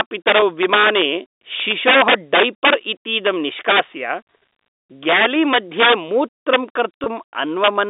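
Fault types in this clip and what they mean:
Integer overflow: Loud stretches break into violent, harsh cracks far sharper than ordinary clipping, at 0.00–1.02, 1.60–2.74, 3.27, 3.69–3.80, 5.09–5.94, 6.54–6.56 and 7.64–7.68 s. The signal was pushed about 1 to 12 dB past the top of the integer range, worst at 5.09–5.94 s. Instead of being held at the limit, each peak wrapped around to the opposite sign and jumped across the full scale.
Packet loss with pitch repetition: Two brief moments, at 0.40 s and 7.04 s, sound slightly held and buzzy, as if the speech briefly sticks on one tone within the narrow telephone band of 250 Hz to 3.7 kHz. Each time, a single 20 ms packet went missing. The receiver filled the gap by repeating the last pitch period it had. That gap is short enough that the fill never fades to silence before the speech resumes.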